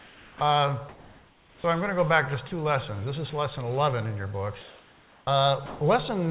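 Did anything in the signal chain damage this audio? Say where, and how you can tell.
Yes. The damage sits in the call processing, at the sender's voice detector and the discontinuous transmission it drives, on a call path that passes nothing above 4 kHz.

Comfort noise in place of the background is heard from 0.00 to 0.41 s, 0.89 to 1.64 s and 4.61 to 5.27 s. In each gap the real background, which sits about 27 to 31 dB below the loudest sound, gives way to a steady, featureless hiss that is about 2 to 4 dB quieter. That points to the sender likely stopping transmission during these pauses, with the receiver synthesising a rough noise estimate instead.

The onset is clipped by the voice detector at 0.37, 1.62 and 5.23 s, right where each comfort-noise stretch ends. The sound enters abruptly, missing its first 20 to 40 ms, with no soft attack. The detector was likely slow to register that sound had resumed, so those opening milliseconds were never sent and synthetic noise covered them.

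Sound is dropped by the voice detector at 2.48 s, where about 20 ms vanishes, and from 5.66 to 5.81 s, where 150 ms gives way to steady noise before the sound returns. A quiet passage or a tail was likely judged to be background, so transmission paused in mid-sound and comfort noise filled the hole.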